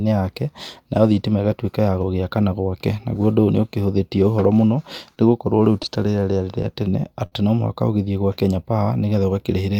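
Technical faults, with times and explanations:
5.58–6.66 s, scattered short gaps: roughly seven tiny holes in this stretch, none longer than about 10 ms. The receiver papered over each one by carrying the last bit of sound forward, so you hear brief ticks and little smears while the speech stays clear.
7.26–7.34 s, short stall from a late packet: one packet turned up late and the jitter buffer ran dry, so the receiver held the last sound for 58 ms. Then it picked up right where it left off. Nothing's lost, just a slightly frozen, buzzy hold.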